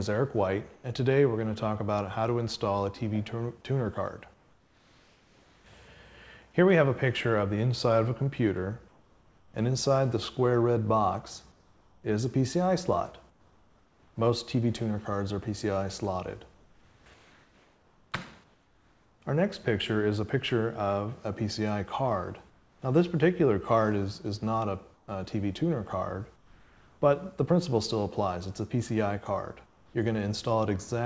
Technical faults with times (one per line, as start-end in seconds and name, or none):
0.74-0.84 comfort noise in place of the background
4.34-5.66 comfort noise in place of the background
8.88-9.54 comfort noise in place of the background
11.52-14.16 comfort noise in place of the background
16.54-19.22 comfort noise in place of the background
22.50-22.82 comfort noise in place of the background
24.94-27.02 comfort noise in place of the background
29.66-29.94 comfort noise in place of the background